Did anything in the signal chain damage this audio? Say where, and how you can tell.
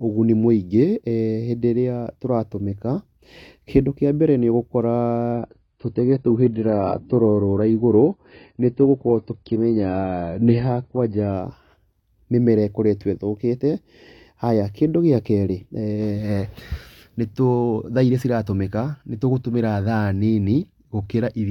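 Yes. The damage comes from the network and codec stage, an adaptive stream at a lower bitrate. From 5.33 to 11.33 s the speech turns dull, with nothing above 7.8 kHz. The change is abrupt, with no gap. The stream likely dropped from 96 kbit/s to 16 kbit/s AAC while the connection slowed, then switched back.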